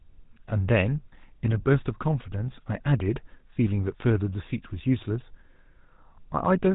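From start to finish, the speech carries GSM full-rate codec damage, plainly audible. Nothing survives above 3.8 kHz, so the sound is dull and boxed in. The codec rebuilds the voice from sparse pulses through a vocal-tract model. That leaves a buzzy, gravelly roughness, consistent with 13 kbps.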